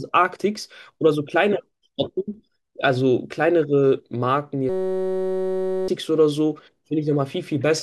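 At 4.69 s the speech stops and gives way to a steady, harsh buzz lasting until 5.88 s, the signature of a system hang loop. The playback path stalled while the sound hardware kept re-reading one 5.33 ms slice of its ring buffer, which fits a 256-sample buffer, repeating it over two hundred times. That tight repetition produces a tone at 188 Hz. About a second of speech is lost under it.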